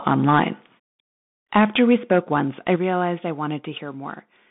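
The whole clip runs through a Bluetooth CVSD headset codec, and you can plainly hear it. The line sits roughly between 150 Hz and 3.6 kHz with nothing above 3.8 kHz, so the speech sounds boxed-in and phone-like. CVSD only sends an up-or-down bit per sample, with a step size that keeps adapting, and that fits the 64 kbps headset link. You get a grainy hiss underneath, and sibilants turn scratchy wherever the signal moves faster than the step can follow.

Microphone overload shows up three times. The first, from 0.07 to 0.44 s, pushes about 7 dB past full scale, with a small but real share of the samples flattened. The second runs from 1.55 to 2.39 s at about 6 dB over. The third is a brief one at 2.68 to 2.75 s, only about 2 dB over. The likely cause is the input gain being set too high, so the loudest peaks slam into the converter's ceiling and get sliced off. That gives those syllables a harsh, crackly edge, strongest in the first and longest bursts.

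Right after that last clip, at 2.76 s, the microphone volume stepped down. Both the speech and the background drop by about 6 dB in one go. This is most likely the call software spotting the clipping and pulling the device's input level down in a single step. You hear it as a sudden dip in loudness right after the distorted peak, rather than a smooth fade.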